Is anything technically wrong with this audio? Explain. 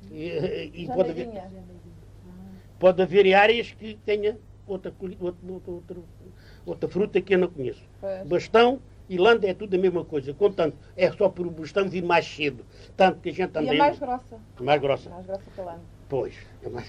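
No, no technical faults detected.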